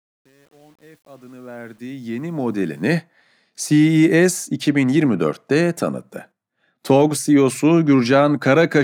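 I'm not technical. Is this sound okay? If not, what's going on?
No. The opening 2.87 seconds, where the speech fades in, has truncation distortion on a fade. The quietest part, from 0 to about 2.0 seconds, sounds gritty, which fits a fade handled with only about 9 bits and no dither.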